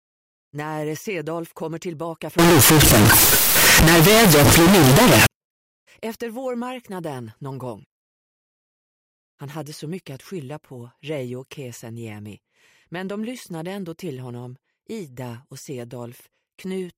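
A float read as integer fault runs from 2.39 to 5.26 s, where the sound turns abruptly into a loud, harsh, nearly square waveform sitting at an almost fixed, high level. This likely comes from 32-bit floating-point samples being interpreted as 32-bit integers, so each sample's sign and exponent bits, not its true amplitude, dictate the level. Quiet background noise becomes as loud as the main sound, though pitch remains traceable.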